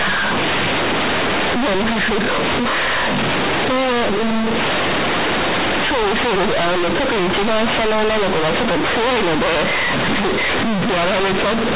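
From start to finish the speech is hit by companded audio read as linear: A-law bytes are played as plain 8-bit samples without expansion. The sound is harsh, loud and buzzy, with heavy noise in pauses. The waveform is bent out of shape throughout, and a spectrogram shows broadband smear up to the 4 kHz telephone ceiling.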